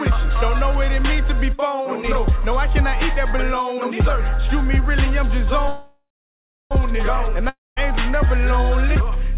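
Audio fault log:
5.68 to 6.73 s, call audio freeze: the sound stops moving and the last moment hangs on as a fading buzz, settling into near silence for about 0.66 s of the roughly one-second hold, then the audio resumes exactly where it left off with nothing skipped, so everything after it runs about 1.03 s late. This is likely packets stalling in transit until the jitter buffer emptied and the receiver had to stretch the final sound while it waited.
7.49 to 7.78 s, long network dropout: a shorter break where the last sound smears into a decaying hiss and then about 0.2 s of quiet, and when the audio returns it has jumped ahead, with about 0.28 s of material gone for good rather than delayed. The likely cause is a run of packets that never arrived, so the receiver filled the hole with concealment and carried on from later audio, all within the narrow band of a G.711 A-law call at 64 kbps, with nothing above 4 kHz.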